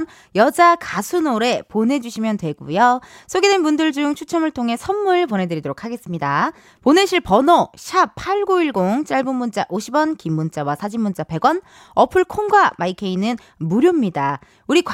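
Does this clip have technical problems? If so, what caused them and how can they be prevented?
No, this clip has no technical problems, so there is nothing to trace to a cause or to prevent.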